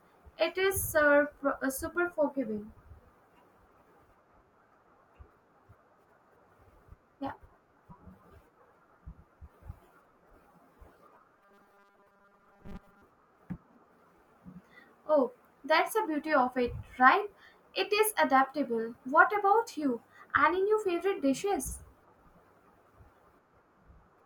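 From 11.37 to 13.02 s the speech takes on robotic sound from repeated short buffers. A stiff metallic buzz at 200 Hz runs through the speech. Most of the audio is skipped. The likely cause is a 5 ms slice replayed while new audio arrives late.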